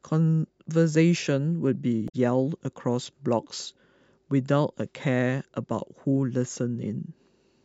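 Damaged data in a compressed stream appears from 2.05 to 2.14 s. Corrupted bytes make the decoder misread those frames and lose sync while it searches for the next valid header. In this speech clip it comes through as a brief glitch.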